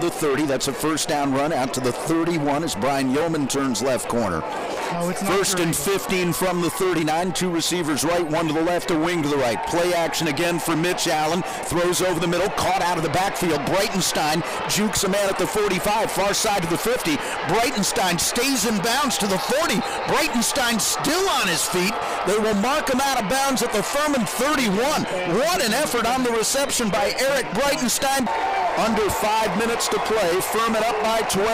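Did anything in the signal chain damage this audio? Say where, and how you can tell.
No, nothing in the signal chain audibly damaged this audio. No stage between capture and playback leaves a mark that can be heard anywhere in the clip.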